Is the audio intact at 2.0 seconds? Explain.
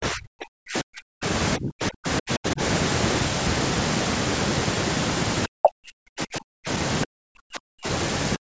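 No. Speech is suppressed in double talk from 1.57 to 2.6 s, likely an echo canceller ducking it under far-end talk. The waveform collapses in patches, at its deepest roughly 40 dB down, leaving gaps in the spectrogram.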